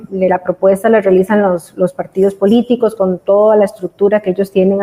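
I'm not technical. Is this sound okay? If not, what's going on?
Yes, nothing wrong can be heard anywhere in this recording.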